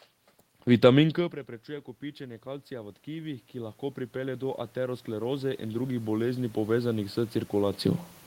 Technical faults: automatic gain rising

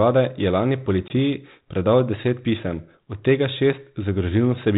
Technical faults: packet loss on an ADPCM call

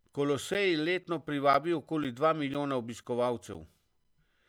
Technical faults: periodic USB or driver dropouts

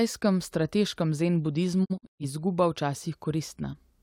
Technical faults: digital broadcast dropout

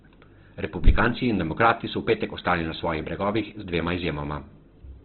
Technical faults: Opus compression

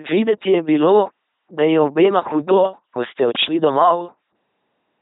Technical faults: LPC-10 vocoder

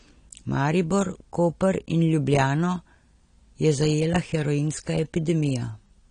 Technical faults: AAC compression

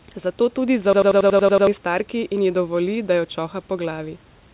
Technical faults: system hang loop

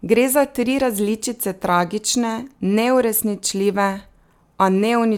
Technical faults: none

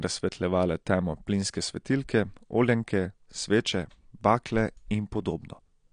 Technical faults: AAC compression

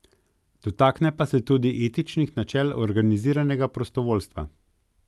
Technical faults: none

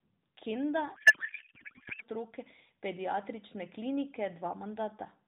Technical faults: codec payload misread

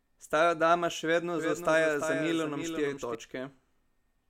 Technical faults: doubled audio track

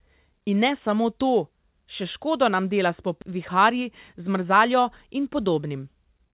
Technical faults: skip ahead; jitter buffer speed-up

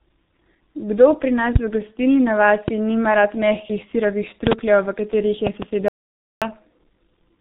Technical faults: G.723.1 codec; audio dropout to silence

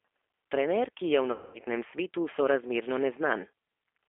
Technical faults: G.729 codec; VoIP packet loss concealed by the speech codec

